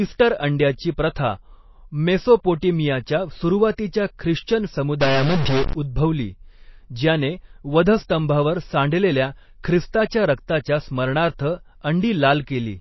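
Speech, with plainly audible watery, swirly codec damage throughout, likely from MP3 compression at a low bitrate near 24 kbps. A spectrogram shows nothing above 5.8 kHz, with patchy, flickering high bands. From 5.01 to 5.73 s, a likely stuck bit corrupts the samples, adding noise and distortion that fill even the gaps. On a waveform this shows as a jagged, offset trace, and on a spectrogram as broadband smearing.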